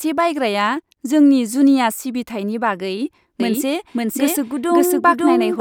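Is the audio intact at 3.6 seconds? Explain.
No. At 3.6 seconds the speech carries a doubled audio track, which begins abruptly at 3.40 s and runs to the end of the clip. A second, full-band copy of the same speech trails the original by about half a second, at roughly the same loudness. It has no reverberant tail or room colouring. The likely cause is a slower capture path recording the audio a second time, or an edit that left two copies out of step.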